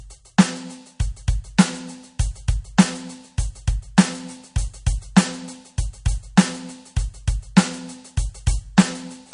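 Throughout the music, the sound is watery and swirly with a hard treble ceiling near 10.6 kHz, likely from MP3 compression at a low bitrate; spectrograms show flickering holes beneath it.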